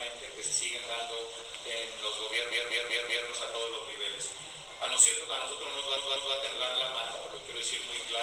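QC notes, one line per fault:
2.51–3.28 s, repeated frames: a 192 ms block, which fits a run of six compressed frames, plays four extra times, adding 768 ms. This is heard as a stutter where the same fraction of a second plays again. The spectrogram shows identical tiles.
5.97–6.35 s, repeated frames: the same 192 ms block length repeats twice more, adding 384 ms. It is a shorter stutter. The waveform shows three matching segments in a row, and the spectrogram shows the same tiling.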